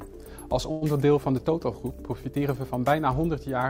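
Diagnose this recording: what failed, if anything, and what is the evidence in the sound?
From 0.71 to 0.84 s the last sound is stretched into a fading buzz or hiss, then the audio resumes where it left off with nothing lost, now about 0.1 s later. This is likely a call audio freeze: network packets stalled, the jitter buffer emptied and the receiver filled the gap.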